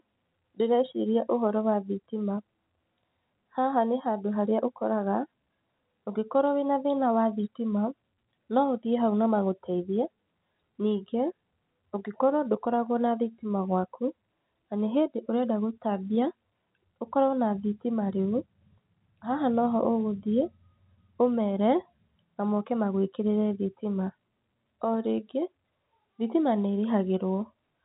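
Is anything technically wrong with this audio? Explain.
No, nothing is technically wrong: the speech comes across the way an ordinary fixed-line telephone call should, with the narrow band that tops out below 4 kHz and only the faint, level-following hiss typical of G.711 telephone coding.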